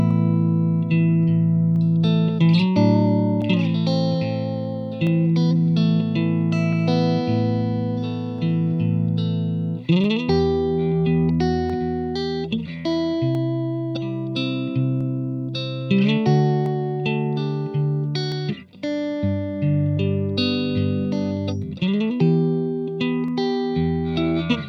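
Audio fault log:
0.11–23.28 s, clock drift buffer slips: a brief click recurs every 1.66 s, roughly fifteen in all. Each is a small discontinuity where a short block of samples, on the order of fifteen, is skipped or repeated. Its strict metronome-like spacing sets it apart from packet-loss dropouts or random crackle, which land irregularly. It is likely caused by two devices whose clocks disagree by roughly 200 ppm, so the buffer between them drifts until it slips.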